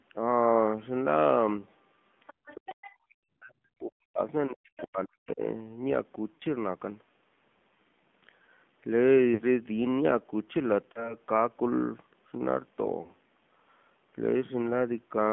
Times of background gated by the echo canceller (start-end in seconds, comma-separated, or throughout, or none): 2.33-2.46